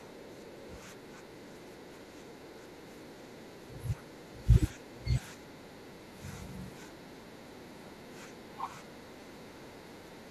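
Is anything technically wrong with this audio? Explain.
Yes, there are three kinds of technical fault.

Speech suppressed in double talk: the speech repeatedly sinks and thins out. From 0.0 to 4.51 s it dips by up to about 10 dB for most of that stretch. From 4.74 to 5.13 s it drops hardest, by about 25 dB, almost cutting out. From 5.35 to 6.24 s it dips again by about 10 dB, and from 6.41 s to the end it sags more mildly, by about 5 dB. The likely cause is both ends talking at once, with the echo canceller unable to tell this talker from loudspeaker echo and turning everything down together.

Other side's voice leaking through: faint second-voice fragments surface at 0.61 to 0.8 s and 1.7 to 2.0 s, sitting about 15 dB below the main speech. They are brief scraps rather than a sustained presence. This is likely far-end audio from the talker's loudspeaker that reached the microphone and was only partly cancelled, so residual echo slips into the outgoing signal during those moments.

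Repeated buffer: at 9.21 s a tiny stutter is heard as a brief buzzy click, where one very short slice of sound repeats with hard joins. The pattern points to a piece of about 5 ms being played three extra times. New audio arrived late, so playback looped the last buffer until fresh data came in. Because the repeated slice is so short, it registers as a click rather than an audible echo of the speech.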